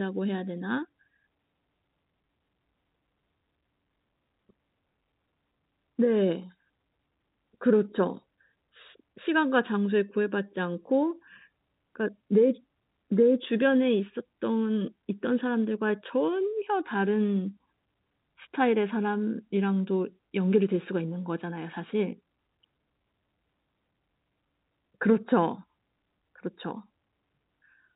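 No technical faults can be heard anywhere here.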